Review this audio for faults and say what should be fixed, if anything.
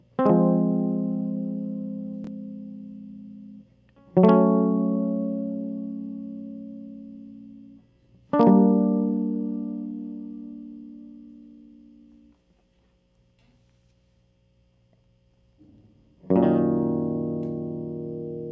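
Nothing needs fixing; no faults are audible here.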